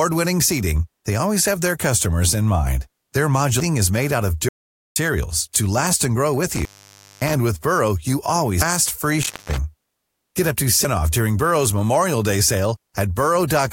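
Damaged data in a compressed stream first shows up at 3.60 s: a corrupted stretch of the encoded file makes the decoder misread a frame, lose sync and hunt for the next valid header. The result is a brief glitch in the speech.

An audio dropout to silence follows from 4.49 to 4.96 s. The speech cuts off mid-flow and about 0.47 s of it is simply gone. The gap is dead silence with no room tone, which points to the input signal likely being lost while the recorder kept writing silence.

Intermittent contact appears from 6.49 to 7.35 s. A loose plug or cable opens briefly, so the speech drops out for about 0.57 s. Crackle marks the break and the reconnection, and faint hiss sits in the gap rather than true silence.

Damaged data in a compressed stream recurs at 8.62 s, another glitch where the decoder stumbles over bad bytes and resynchronises.

Intermittent contact returns from 9.22 to 9.57 s, a shorter open of about 0.19 s. 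It has the same crackly edges and thin hiss while the line is disconnected.

Damaged data in a compressed stream strikes a third time at 10.85 s. It is again a quick glitch as the decoder finds its next frame.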